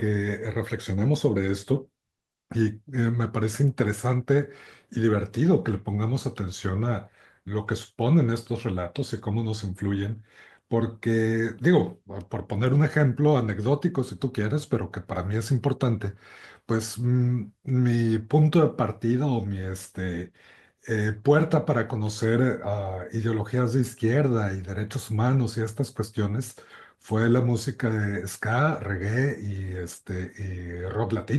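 No technical faults can be heard anywhere in the speech recording, and the signal remains continuous and intact throughout.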